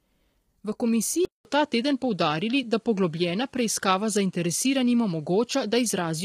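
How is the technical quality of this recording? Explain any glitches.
The recording is poor, with heavy codec damage throughout and a change of input early on.

Low-delay AAC compression, throughout: the roughness likely comes from AAC-ELD, whose short frames resolve pitch harmonics poorly. Heavy damage, consistent with a bitrate around 24 kbps, leaves the speech grainy and rough, with noise filling the gaps between harmonics.

Input switched to a poorer device, at 1.25 s to the end: the input likely changed to a weaker microphone or headset path. A 200 ms silence marks the switch, then nothing passes above 11.4 kHz, the level shifts by roughly 5 dB, and a faint new noise floor appears.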